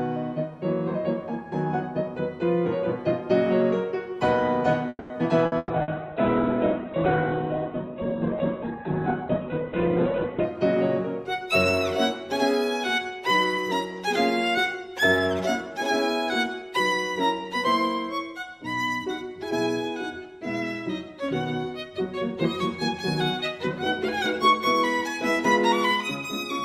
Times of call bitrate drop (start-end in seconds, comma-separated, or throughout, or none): 5.62-10.56